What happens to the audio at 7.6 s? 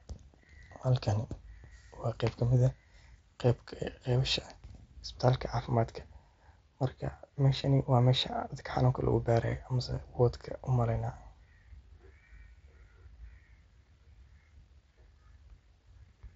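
At 7.62 s there is concealed Bluetooth headset packet loss: about 15 ms of audio, which fits two lost mSBC frames, is patched by repeating the best-matching recent stretch of waveform. The waveform shows a short, repeated cycle, and the spectrogram shows a brief smear of copied harmonics below the 8 kHz band edge.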